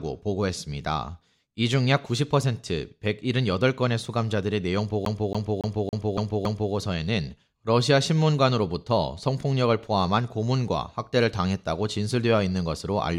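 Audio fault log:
5.05–6.73 s, CD stuck on one turn: one 280 ms slice of speech repeats six times, each jump muted briefly; its steady rhythm distinguishes it from random glitches.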